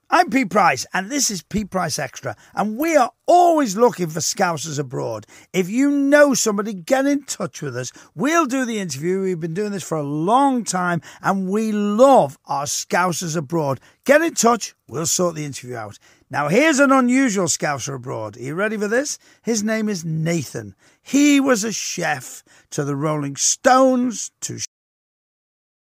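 At 24.65 s the speech stops mid-sound: a cut-off end, where the final buffers never reached playback. Unlike a fade or natural ending, it drops straight to digital silence without decay.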